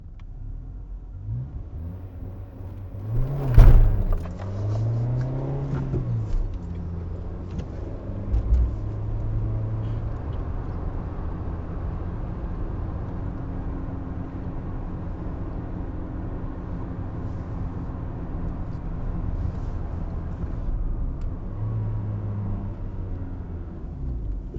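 An everyday-sound recording with a thin, bright metallic fizz from 1.78 to 4.24 s, riding about 37 dB below the sound and tracking its level. This is imaging from sample-and-hold upsampling: with samples simply repeated, mirrored spectrum copies fill 8–16 kHz, which fits a rise from 16 kHz to 48 kHz.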